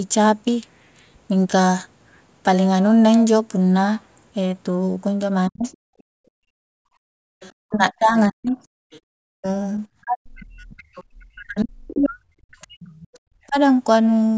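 At 5.48 to 5.66 s the speech is pushed down by around 40 dB for a fifth of a second, speech suppressed in double talk, likely because the echo canceller could not tell the near talker from loudspeaker echo and attenuated both. From 5.63 to 6.01 s the other side's voice leaks through faintly, roughly 25 dB under the speech, probably residual loudspeaker echo the canceller failed to remove. Between 5.94 and 7.36 s the background is gated by the echo canceller, with the room sound dropping by about 37 dB while the canceller clamps the microphone and then recovering. Further scraps of leaked far-end voice appear at 7.41 to 7.52 s and 8.91 to 9.00 s, around 30 dB down. From 7.64 to 13.56 s double-talk suppression returns, cutting the speech by up to roughly 40 dB for about four seconds in total. Within this stretch, from 10.77 to 13.18 s, the other side's voice bleeds through again at roughly 25 dB below the speech.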